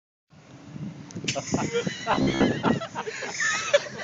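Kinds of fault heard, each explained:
Robotic sound from repeated short buffers: from 2.12 to 2.45 s the sound turns rigid and metallic, with a fixed buzz near 67 Hz that roughly tracks the underlying audio. The likely cause is audio arriving too seldom, so playback fills gaps by looping the most recent fragment, about half of what is heard there being repeats while real audio is skipped. The buzz frequency fits a repeated chunk of about 15 ms.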